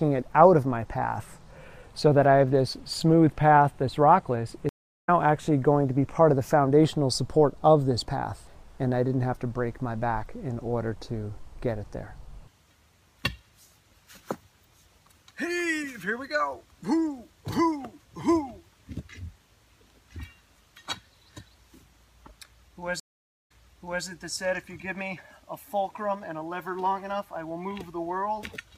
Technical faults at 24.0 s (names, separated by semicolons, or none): stream reconnect